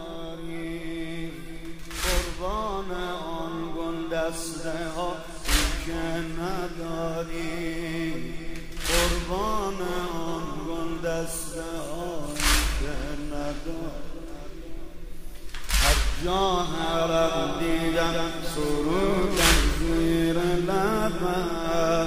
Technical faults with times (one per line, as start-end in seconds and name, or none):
17.24-19.42 doubled audio track